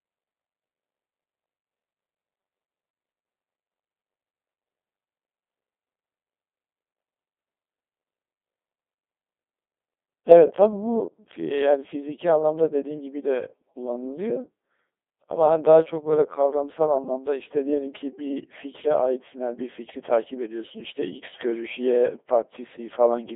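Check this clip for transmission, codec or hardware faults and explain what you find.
The speech has been through a Codec 2 vocoder for the whole clip, and it's heavy damage. Codec 2 doesn't keep the waveform. It sends only pitch, voicing, energy and a rough spectral envelope, then rebuilds the voice from sine waves, so you get that robotic, buzzy tone. The band runs about 300 Hz to 3.6 kHz, and the harshness points to a very low rate, around 2.4 kbit/s.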